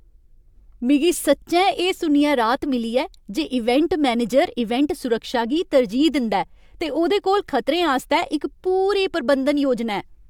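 No dropouts, distortion, clicks or other technical faults are audible anywhere in the recording.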